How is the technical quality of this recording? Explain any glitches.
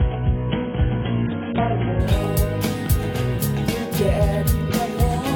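The opening is dull and band-limited, then the sound clears abruptly. From 0.0 to 2.0 s nothing sits above about 3.7 kHz and codec smearing is stronger. This is an adaptive stream starting at a low bitrate, one that fits roughly 16 kbit/s AAC, before stepping up to about 96 kbit/s with no gap.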